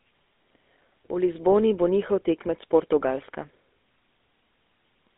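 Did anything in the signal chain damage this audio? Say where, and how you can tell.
Yes, at the codec stage, and it's there from start to finish. The speech has that buzzy, gravelly roughness you get from GSM full-rate coding, and the band is squeezed to roughly 250 Hz to 3.6 kHz with nothing above. The codec models the vocal tract and drives it with a sparse, regularly spaced pulse train, throwing away most of the excitation detail. That's what makes the grit, which fits a 13 kbps full-rate stream.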